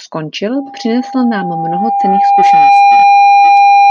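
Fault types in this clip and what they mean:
Loudspeaker feedback squeal: the microphone re-amplifies its own loudspeaker, and an 803 Hz tone grows from 0.54 s over about two seconds to roughly 10 dB above the speech.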